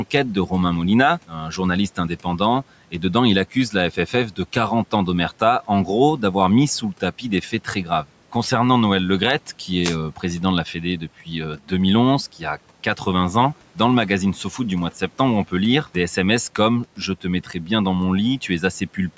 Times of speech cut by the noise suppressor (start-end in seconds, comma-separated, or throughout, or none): 1.28-2.93, 3.54-5.88, 6.81-8.34, 10.16-11.71, 16.97-17.69